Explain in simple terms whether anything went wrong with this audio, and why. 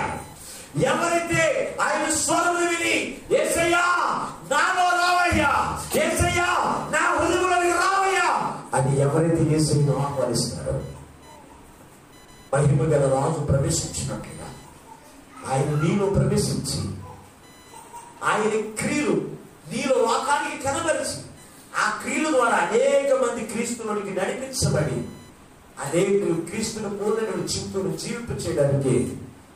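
Computer activity noise runs from start to finish: a faint, rapid buzz pulsing roughly a thousand times a second, sitting well below the main sound. It comes from the computer itself. As the processor, graphics card or mouse change their workload, they disturb the electrical ground the audio circuit shares with them, and that disturbance leaks into the recording. It follows the machine's activity, not the sound being recorded.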